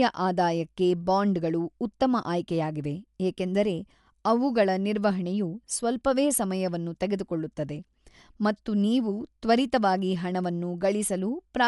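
From start to finish the speech sounds dull and band-limited, with rough, fluttering noise around voiced tones. This is likely Dolby Digital compression at a low bitrate, which fits about 64 kbps. Starved frequency lines get filled with noise. A spectrogram shows nothing above 11.6 kHz and grainy speckle between harmonics.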